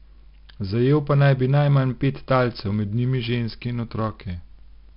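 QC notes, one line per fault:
Throughout: 4-bit ADPCM compression. Each speech sample is coded as a coarse 4-bit step from a predicted value, and the step size adapts only gradually, so a gritty hiss rides on every loud passage and scales with its level. Sharp onsets smear and distort where the step cannot grow fast enough. The damage is heavy, and nothing is present above 5.3 kHz, which fits a sample rate near 11 kHz and gives a dull, band-limited sound.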